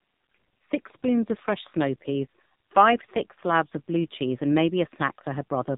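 Speech throughout runs through an AMR narrowband mobile codec: nothing above 3.8 kHz, and heavy buzzy, synthetic coloration that points to a low mode near 5.9 kbps, unlike a plain band-limit.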